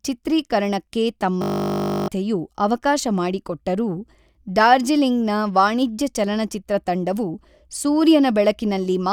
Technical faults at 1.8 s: system hang loop

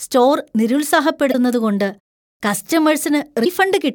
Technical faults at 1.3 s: damaged data in a compressed stream

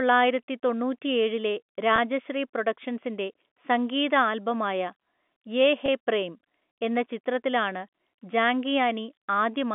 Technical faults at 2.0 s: packet loss with pitch repetition

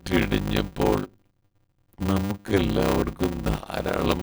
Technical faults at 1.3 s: block size mismatch (padded)

